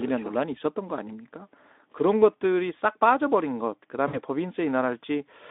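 Packets were dropped on a VoIP speech link at 4.07 to 4.18 s, with about 60 ms of audio lost, which fits three 20 ms frames. The decoder's packet loss concealment filled the gap by extending its last pitch and filter at falling gain, so the speech blurs into a buzzy tone or coloured noise that fades, and it stays weak or distorted as the prediction recovers. The Speex link carrying the speech is narrowband, roughly 250 Hz to 3.6 kHz.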